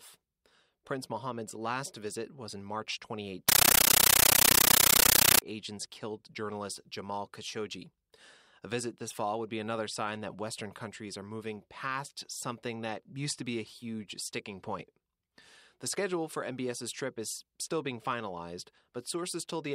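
From 3.49 to 5.42 s, before "agents killed journalist", there's a compressed stream played as audio: undecoded AC-3 data heard as loud static chattering 31.25 times a second.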